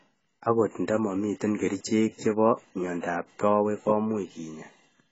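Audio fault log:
Throughout, AAC compression: the speech is dull and smeared, with a warbling, fizzy texture on sustained sounds and sibilants and nothing above 7.7 kHz. Heavy damage like this likely comes from AAC-LC starving its coarsely quantised frequency lines, which fits a bitrate near 16 kbps.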